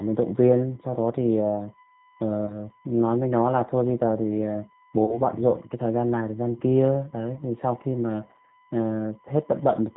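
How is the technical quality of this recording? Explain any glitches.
The quality is poor, with narrowband, coded-sounding speech, a constant tonal whine and three brief concealed dropouts.

USB whine runs throughout as a fixed 1 kHz tone about 30 dB below the speech. Bus frame current leaks through power or ground, drawing a flat horizontal line on a spectrogram.

The G.729 codec at 8 kbit/s leaves plainly audible damage. Speech is rebuilt from a filter, pitch predictor and sparse pulses, sounding rough and synthetic. The spectrogram is empty above 4 kHz.

VoIP packet loss concealed by the speech codec occurs at 2.46–2.55 s, 5.05–5.21 s and 7.35–7.43 s. Missing audio, consistent with 20, 30 and 10 ms losses, was extrapolated from earlier pitch and filter. It is heard as a buzzy tone or coloured noise that fades, and appears as a smeared, decaying envelope on the waveform.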